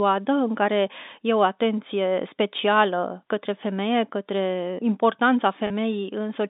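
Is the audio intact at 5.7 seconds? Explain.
No. A short packet loss with pitch repetition occurs from 5.67 to 5.70 s. About 30 ms of audio, consistent with a single lost packet, was filled by repeating the last pitch period. It sounds like a brief, slightly held, buzzy tone.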